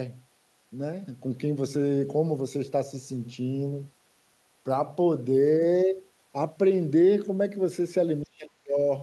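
Right near the end, from 8.22 to 8.85 s, the speech gets pushed way down, by something like 40 dB at its deepest. That's speech suppressed in double talk, likely an echo canceller that couldn't tell this talker apart from loudspeaker echo while both sides spoke, so it ducked everything.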